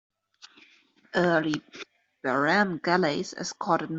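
There are no technical faults in this speech to describe in time order.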